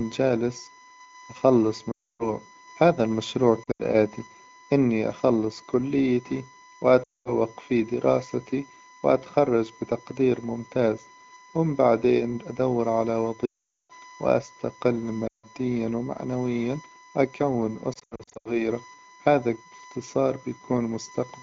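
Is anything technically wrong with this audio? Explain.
Yes. USB bus current drawn in 1 ms frames leaks into the audio, leaving a steady 1 kHz whine throughout, roughly 25 dB below the speech.

Lost AMR speech frames occur at 1.91, 3.64 (after "هذا المشروع"), 7.03, 13.45 (after "هم بعدين أدور على"), 15.27 and 17.93 s (after "ومعنويا وأكون"). Each time, corrupted frames make the decoder repeat old settings at falling gain. The speech smears, warbles or fades for 0.12 to 0.44 s, then returns briefly rough.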